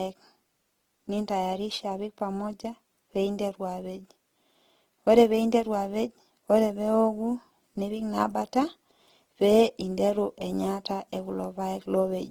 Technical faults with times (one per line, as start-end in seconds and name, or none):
0.00-12.30 Opus compression